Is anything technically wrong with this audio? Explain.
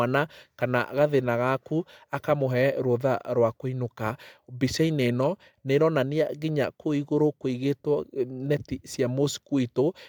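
No, nothing technically wrong can be heard here.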